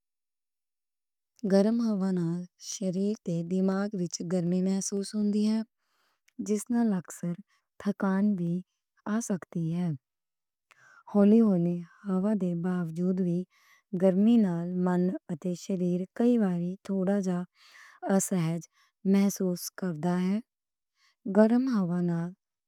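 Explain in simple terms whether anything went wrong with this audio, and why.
Periodic USB or driver dropouts, 0.22–14.97 s, before "اتے شریر کئی واری": every 0.25 s, a tiny sliver of speech is skipped as something blocks the audio path, causing regular ticks.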